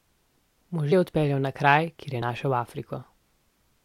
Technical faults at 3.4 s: none

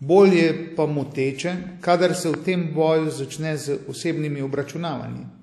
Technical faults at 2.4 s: WMA compression; loud pop

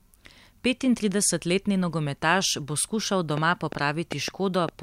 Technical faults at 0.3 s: none

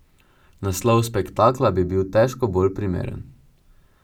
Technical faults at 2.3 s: channel delay (comb filtering)

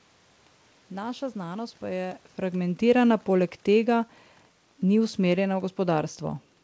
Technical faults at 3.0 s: automatic gain falling

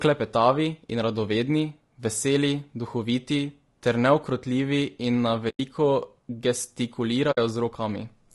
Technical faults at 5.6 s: low-delay AAC compression; AAC frame loss with muting

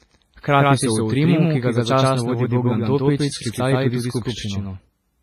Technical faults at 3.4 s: doubled audio track; WMA compression

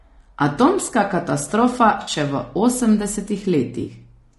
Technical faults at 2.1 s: low-delay AAC compression; AAC frame loss with concealment

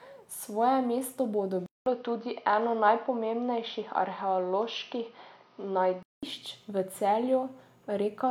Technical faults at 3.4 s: input switched to a poorer device

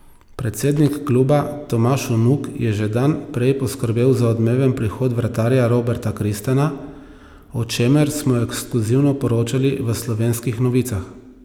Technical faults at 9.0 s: none

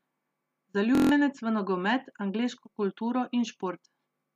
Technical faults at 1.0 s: system hang loop

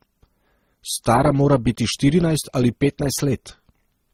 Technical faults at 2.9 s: transcoding between lossy codecs

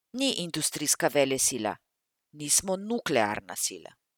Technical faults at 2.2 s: none

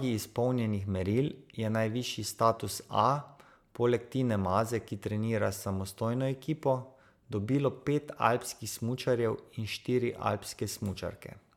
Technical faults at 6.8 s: none

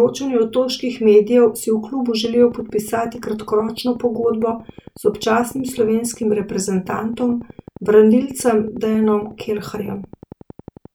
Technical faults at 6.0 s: train of clicks

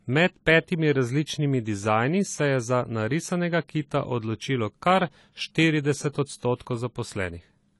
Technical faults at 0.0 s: AAC compression

